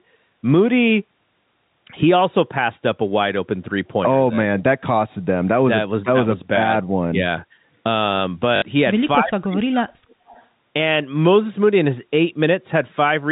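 Telephone speech, carried over G.711 mu-law coding with nothing above 4 kHz. At 8.56 s the receiver lost about 60 ms of audio, which fits three 20 ms packets, and filled the gap by replaying the last good packet until fresh ones arrived. Through 8.62 s this produces a brief robotic stutter that buzzes at the 50 Hz packet rate. From 9.19 to 10.14 s the voice dips, by around 40 dB at its deepest, for roughly one second in total. This is likely speech suppressed in double talk: the echo canceller could not tell its own talker from loudspeaker echo and turned both down. From 10.12 to 10.54 s a faint copy of the voice returns 274 ms late, around 30 dB below the speech. This is likely an echo leak, where a loudspeaker's output got past the canceller and was sent back.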